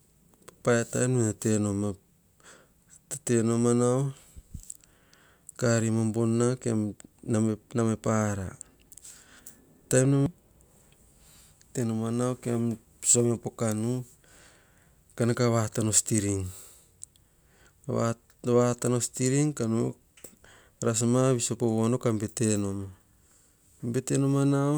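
Nothing here jumps out as a technical fault; the speech runs along without any glitch, dropout or distortion catching the ear.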